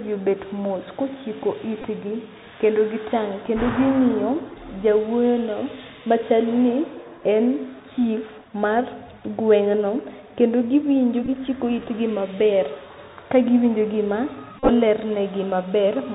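The whole clip runs through the Bluetooth CVSD headset codec, and you can plainly hear it. The band stops at 4 kHz, s sounds come out scratchy, and there's a grainy hiss under the speech. That's the one-bit up/down encoder with its adapting step failing to keep up with loud, bright sounds, which fits the 64 kbps headset link.

Then there are three spots where the headset packet got repeated, meaning the chip re-decoded the previous packet's bits when voice packets went missing. At 1.82 s there's a short buzzy tick about 19 ms long, which points to roughly five lost packets. At 11.25 s about 26 ms of repeats are scattered over 30 ms, with the longest run around 15 ms. The worst is at 14.58 s, where about 75 ms is lost across 105 ms, and the longest run of roughly 30 ms turns into a steady buzz near 267 Hz from the 3.75 ms repeat cycle.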